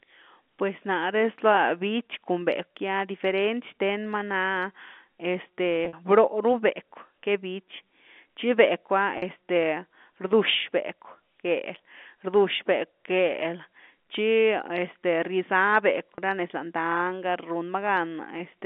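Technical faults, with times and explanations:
9.18 s and 16.15 s: packet loss with pitch repetition. A brief held, buzzy tone, about 40 ms then 30 ms, where lost audio was bridged by repeating the last pitch period.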